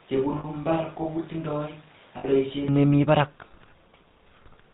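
GSM full-rate codec throughout: the voice is modelled as a vocal-tract filter fed by sparse pulses, giving plainly audible buzzy, gravelly roughness and nothing above 4 kHz.

Switch to a distant microphone, from the start to 2.68 s: the speech sounds roomy and hollow, about 10 dB quieter with thinner bass, likely from a fallback microphone, before the sudden return to close pickup.

Lost GSM frames at 0.38 to 0.45 s and 2.18 to 2.25 s: each 60 ms gap, which fits three missing 20 ms frames, is filled by repeating the last good frame, producing a brief rough, metallic ring.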